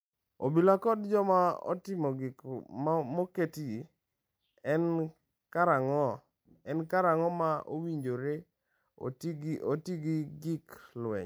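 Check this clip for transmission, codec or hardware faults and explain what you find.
No faults detected in this clip.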